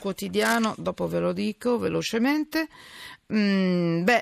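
Cable scratch noise runs from 0.39 to 0.56 s: a dense, uneven burst of scratching and rustling sits over the speech, roughly 10 dB below it. The likely cause is a worn cable or connector being moved, its contact resistance fluctuating rapidly.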